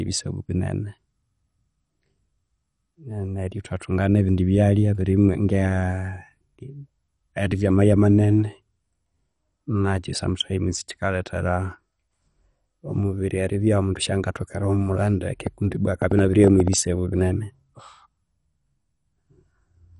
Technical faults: MP2 compression; train of clicks

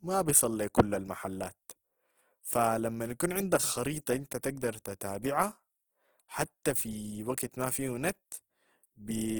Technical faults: Opus compression

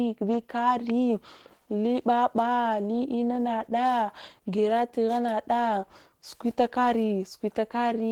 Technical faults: Opus voice compression

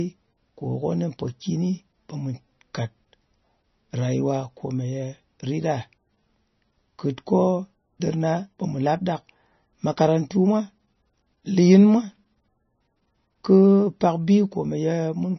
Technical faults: MP3 compression

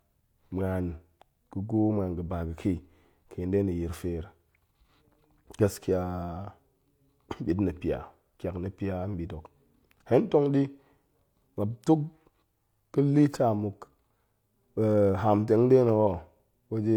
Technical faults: none

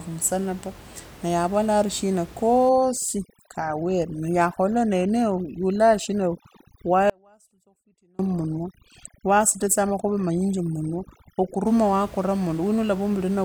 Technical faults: overdone noise removal; audio dropout to a faint residue

